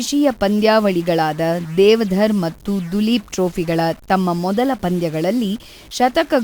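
Speech, with a harsh, buzzy distortion running through the whole clip and a steady noise filling the pauses, from a step of about -35 dBFS. This is likely a stuck bit in the converter or data line, offsetting roughly half the samples by that bit's weight.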